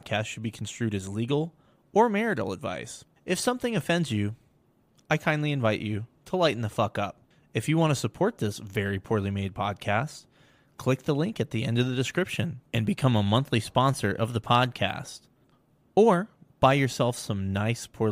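Nothing in the signal points to a technical fault at any point in the recording.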